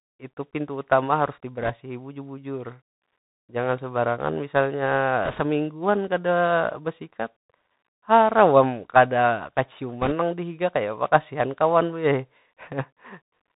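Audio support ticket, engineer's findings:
Bluetooth CVSD headset codec, whole clip: speech band-limited, nothing above 4 kHz, scratchy s sounds, granular hiss under everything, loud high bits distorting where the adaptive step can't keep up. Damage plainly audible. Sounds like a one-bit delta link, fits 64 kbps CVSD.

Bit errors on the Bluetooth voice link, 1.62–1.70 s, 5.25–5.41 s and 10.01–10.13 s: brief rushing, crackly noise bursts, no sharp clicks since each flipped bit only nudges the step and fades out. Error rate a few percent, a bit worse in the last burst.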